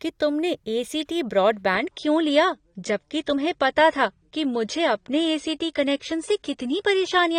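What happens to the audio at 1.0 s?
Nothing goes wrong at 1.0 s: the speech runs on intact through that moment, with no dropout, click, glitch or other fault to be heard.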